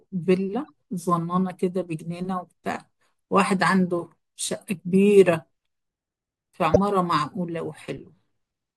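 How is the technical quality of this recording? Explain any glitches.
The recording has three short decoding glitches. Corrupt frames decoded at 0.68 s, 4.95 s and from 6.74 to 6.79 s: flipped bits in a few compressed frames went undetected, so the decoder rebuilt them with wrong gains and misread codes, placing energy at incorrect frequencies for roughly a frame's length each. The first is a faint glitch near -45 dBFS, the second a clearer one around -20 dBFS, and the last a loud glitch peaking close to -5 dBFS.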